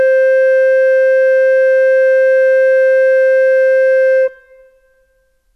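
From start to finish the music is played back with a wrong sample rate: the samples run out at a lower rate than they were captured at, and nothing resamples them. The music moves at two-thirds of its proper speed, which fits material recorded at 48 kHz being clocked out at 32 kHz. Pitch falls with the tempo by about seven semitones, a drop of a fifth, so everything sounds sluggish, heavy and darkened.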